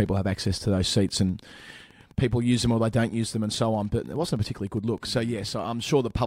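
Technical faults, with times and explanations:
Throughout, Wi-Fi interference: a steady ticking sits well beneath the speech, repeating every 102.4 ms, close to ten times a second. A nearby Wi-Fi radio's beacon transmissions are being picked up and rectified by the audio circuit, turning each radio pulse into an audible click.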